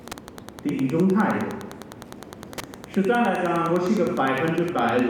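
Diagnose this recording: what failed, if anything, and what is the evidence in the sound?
Wi-Fi interference runs throughout, entering at the analogue wiring stage: a steady ticking repeats every 102.4 ms, just under ten times a second, about 20 dB below the wanted sound. A nearby Wi-Fi radio's beacon bursts are being rectified by the audio circuit.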